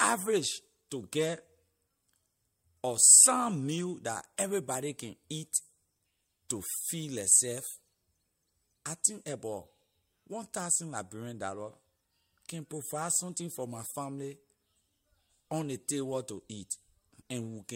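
Pre-echo occurs at 0.90 s, at 4.37 s just before "everybody can eat", and at 6.49 s just before "to feed". Each time a short hiss arrives 12 to 14 ms ahead of a sharp attack. The noise rises by about 14, 17 and 18 dB. The codec spread its quantisation noise across a block of about 26 ms. The smear points to it never switching to short blocks. Each attack sounds softened.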